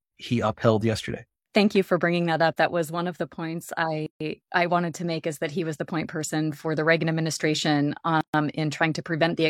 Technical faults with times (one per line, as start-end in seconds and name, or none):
4.06-4.20 gap at a join of encoded pieces
8.21-8.34 gap at a join of encoded pieces